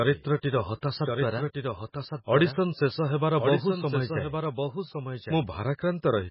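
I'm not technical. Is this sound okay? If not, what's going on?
No. Two problems run through the whole 6-second speech recording.

The first is a doubled audio track. A second copy of the same speech plays along about one second behind the original, a little quieter than it. It has no echo tail or room sound of its own, so it isn't a natural echo: the recording is simply mixed with a delayed duplicate of itself. The likely cause is the sound being captured twice, once through a slower route, or an edit leaving two misaligned copies in place.

The second is heavy MP3 compression, likely from saving the file at a very low quality setting. To make the file small, the encoder threw away sound it judged unimportant and removed everything above about 5.5 kHz. That upper range carries much of the crispness of speech, so the voice sounds dull and muffled. Faint details that the encoder kept in some moments and dropped in others come and go, which gives the sound a watery, swirling quality.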